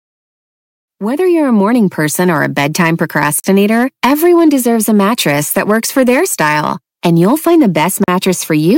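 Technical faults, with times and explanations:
3.40 to 3.44 s and 8.04 to 8.08 s, block of digital silence: The speech drops to silence for 40 ms each time, the first just before "everyone deserves a mattress". The signal stops and restarts with no fade. At 40 ms the result is a short hole rather than a single tick. Equal 40 ms gaps suggest output buffers that were not filled in time.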